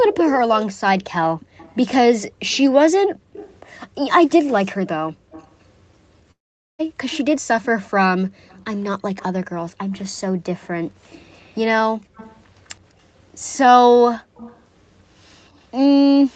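Right at the start, 0.03 to 0.23 s, there's an echo leak: a copy of the speech trailing by about 207 ms, about 10 dB down, likely from a loudspeaker the echo canceller didn't fully cancel. It returns from 1.57 to 5.64 s at about 20 dB down, and again from 7.09 s to the end at about 25 dB down.

Between 3.09 and 3.33 s the background gets gated by the echo canceller. The room sound dips by up to about 40 dB for roughly a fifth of a second, then comes back.

From 6.31 to 6.81 s there's a long network dropout, likely lost packets. The last sound smears into a fading buzz, then goes nearly silent for about 0.44 s before the audio resumes with roughly half a second missing.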